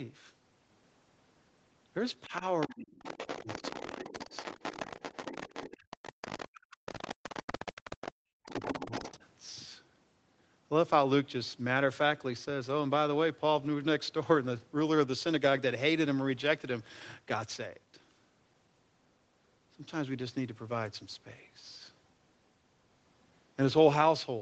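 From 2.25 to 2.91 s the talker's speech dips by up to about 25 dB across roughly a third of a second. This is speech suppressed in double talk. The likely cause is an echo canceller that could not separate the near talker from loudspeaker playback of the far side, so it turned both down. Shorter dips follow at 3.43 to 3.62 s (about 10 dB) and 4.09 to 4.32 s (about 15 dB). The longest, from 6.09 to 7.83 s, reaches about 40 dB and takes out around a second of speech in pieces. A final one at 8.41 to 8.52 s also reaches about 40 dB. In each case the main voice itself sinks or breaks up. No second voice is what gives it away.

The other side's voice leaking through is different. A second voice is added rather than the main one being cut, and it sits about 15 dB below the speech from 2.6 to 6.48 s and from 6.86 to 8.12 s, then about 10 dB below from 8.44 to 9.17 s. Echo the canceller failed to remove from the microphone is the likely source. 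Both faults play out in audio that is band-limited to 8 kHz by the Opus call path.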